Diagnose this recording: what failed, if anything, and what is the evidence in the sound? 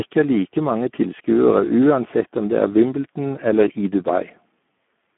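The Speex codec stage failed, throughout the clip. The speech sounds hoarse and noisy, which points to a starved CELP excitation at a rate near 8 kbps. Plain telephone band-limiting, with energy from 200 Hz to 3.4 kHz and nothing above 3.8 kHz, would sound narrow but clean, not gritty.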